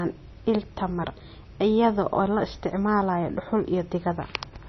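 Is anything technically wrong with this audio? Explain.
Yes. Throughout the speech, the treble stops dead at 6 kHz, and what remains has a watery, swirling quality, with metallic chirps on s sounds and smeared consonant attacks. This is likely heavy MP3 compression, consistent with a very low bitrate of around 24 kbps. The encoder cuts the top band and zeroes weak frequency lines, which then flicker on and off between frames. A simple low-pass filter would dull the sound just as sharply but leave no swirl or chirping.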